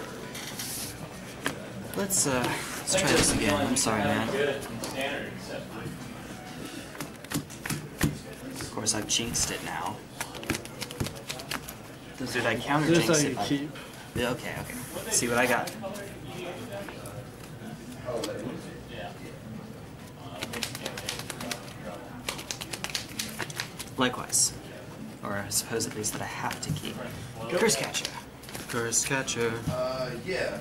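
Between 9.25 and 11.2 s the audio carries a regular 20 Hz ticking: resampler restarted on every block, which points to 50 ms blocks converted independently from 44.1 kHz to 48 kHz. Each block edge leaves an error, showing as evenly spaced vertical lines on a spectrogram and small waveform discontinuities every 50 ms.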